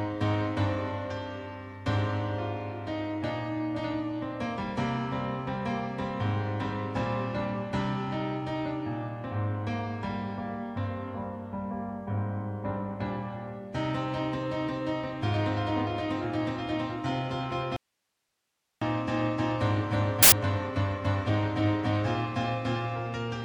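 At 17.76 s there's an audio dropout to a faint residue lasting about 1.05 s: the signal likely got lost while the path stayed live, leaving only hiss roughly 50 dB down. Then from 20.23 to 20.32 s a corrupt FLAC frame shows up as a brief error peaking around -9 dBFS, which suggests a couple of damaged frames decoded unchecked.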